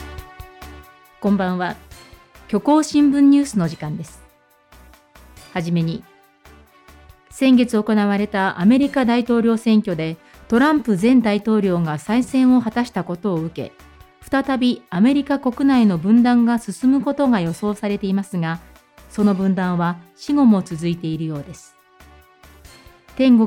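No technical faults are audible anywhere in this audio.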